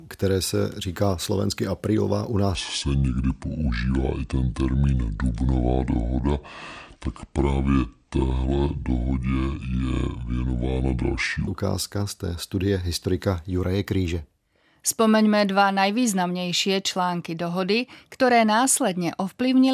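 From 2.55 s to 11.47 s the speech drops into a wrong sample rate fault: audio recorded at 48 kHz is being clocked out at 32 kHz with no resampling. Every sample lasts longer, so the passage runs at about two-thirds speed and its pitch falls by roughly 7 semitones. The voice turns deep, slow and drawn out, with formants lowered along with the fundamental, until normal rate resumes after 11.47 s.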